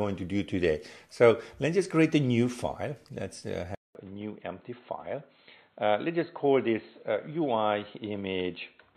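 At 3.75 s there's a 200 ms gap, then everything after sounds duller and boxier, with nothing above 4.2 kHz, a level drop of about 5 dB and a faint new noise floor. That's likely the input switched to a poorer device, staying that way to the end.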